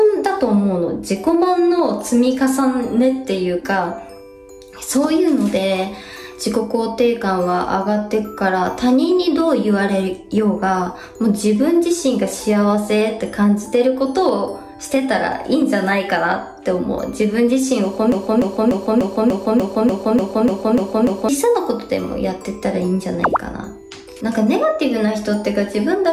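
From 18.12 to 21.29 s, a broken-record loop repeats one 295 ms fragment eleven times, likely from a stalled stream; the intended audio is lost.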